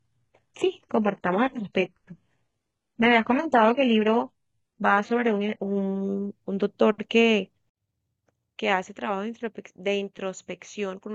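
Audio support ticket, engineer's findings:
Speech from 0.0 to 6.0 s: dull top end, synthetic-sounding treble, heavier codec artefacts. At 6.0 s, a sudden jump in clarity with no gap. Adaptive stream starting at a low bitrate. Player opened on a low rung, consistent with roughly 12 kbit/s HE-AAC, then switched to around 96 kbit/s AAC-LC.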